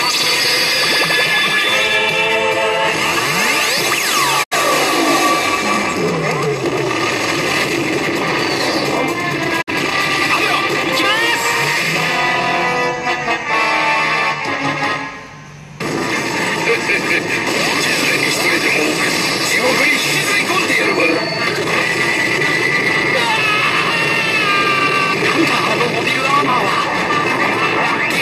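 The audio has two digital broadcast dropouts, at 4.42 to 4.53 s and 9.61 to 9.69 s. Each time, the sound fades out over about 20 ms and falls silent, consistent with the receiver muting on a few failed frames.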